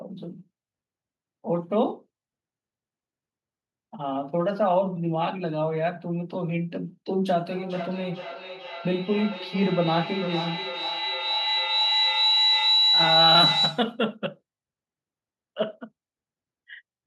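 From 7.5 to 14.02 s, a feedback howl builds as sound loops from loudspeaker to microphone, gaining level each trip. A tone near 4 kHz grows from repeats about 400 ms apart, peaking about 3 dB above speech: a bright horizontal spectrogram line.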